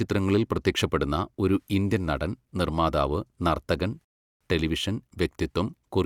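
Right after "ഇന്ത്യൻ നടൻ നിർമ്മാതാവ് നർത്തകൻ", at 4.05 s, there's a rebuffering stall: the player ran dry, went silent for about 0.36 s, then picked up exactly where it left off.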